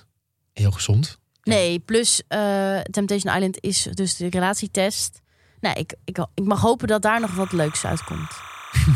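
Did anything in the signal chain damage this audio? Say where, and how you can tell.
Yes. Timecode bleed enters in the analogue wiring from 7.17 s to the end at 8.95 s: a chirping warble alternating around 1 and 2 kHz sits roughly 15 dB below the speech. Its rhythm fits 29.97 fps linear timecode leaking capacitively from an adjacent track or cable.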